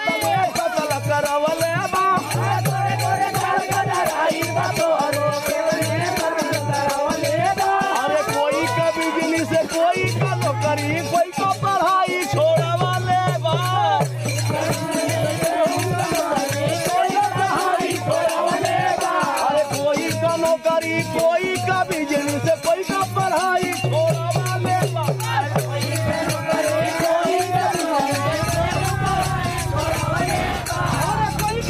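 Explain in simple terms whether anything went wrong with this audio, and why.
Nothing went wrong with this audio that a listener can pick out. At no point does anything in it stand out as a technical problem.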